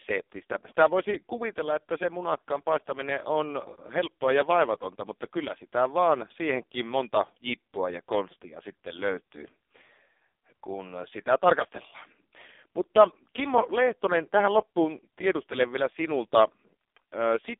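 From start to finish the speech carries the AMR narrowband mobile codec sound. Everything above 3.6 kHz and below 300 Hz is gone, and the heavy buzzy, synthetic colouring points to one of AMR-NB's lowest bitrate modes, around 5 kbps.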